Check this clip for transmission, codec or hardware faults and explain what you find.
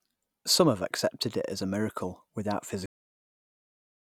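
One fault is present in this speech clip: a cut-off end. At 2.86 s the audio stops mid-sound and drops straight to digital silence, with no decay, through to the end. The final buffers were never written or played, so the recording simply ends there.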